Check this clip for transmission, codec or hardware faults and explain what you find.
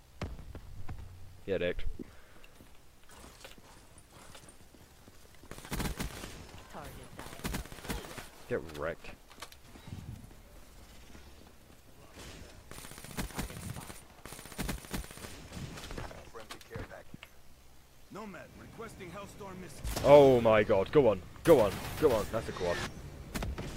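Nothing audible points to a transmission, codec or hardware fault anywhere in the clip.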